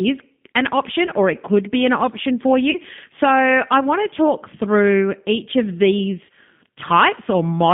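Throughout, the speech carries G.729 codec damage, plainly audible: a rough, slightly synthetic texture from the low-bitrate coding, which points to G.729A at 8 kbit/s. On a spectrogram, energy sits between about 150 Hz and 3.6 kHz, with nothing above.

At 1.06 to 1.12 s, VoIP packet loss concealed by the speech codec replaces a 20 ms gap, which fits a single lost packet, with extrapolated sound that fades. At 2.71 to 2.78 s and 6.25 to 6.29 s, 40 ms gaps are concealed the same way. In each case the decoder repeats its last pitch and filter at falling gain and stays weak briefly afterwards. Spectrograms show smeared, flat harmonics; waveforms show a decaying envelope.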